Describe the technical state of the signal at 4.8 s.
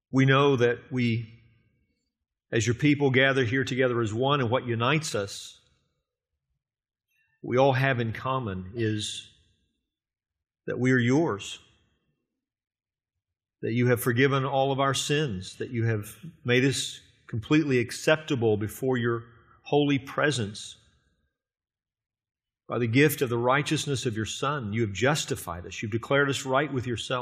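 At 4.8 s the speech signal is intact, with no fault audible at that moment.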